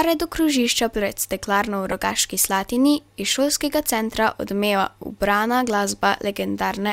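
At 1.91 to 1.94 s, just after "krožišča pred steklarno v", a corrupt frame is decoded: damaged bits in a couple of compressed frames were played anyway, misplacing spectral energy. The result is a brief, fairly loud chirp-like burst, peaking around -10 dBFS.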